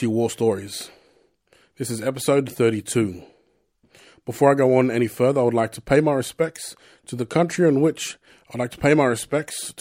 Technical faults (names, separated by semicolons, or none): none